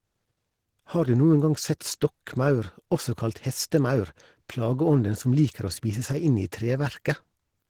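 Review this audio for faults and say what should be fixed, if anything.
Opus compression damage runs through the whole speech recording, plainly audible from start to finish. The voice sounds hoarse and muffled, with a grainy, rough texture on voiced sounds, which fits Opus likely running in its hybrid speech mode at a low bitrate around 16 kbps. Too few bits are available, so fine spectral detail is rebuilt coarsely rather than preserved. Bandwidth is not the problem, since content extends to about 20.2 kHz. Encode at a higher bitrate, or keep an uncompressed master and compress only at final delivery.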